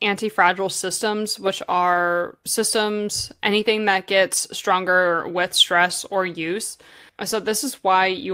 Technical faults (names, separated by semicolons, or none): lost packet rebuilt from error correction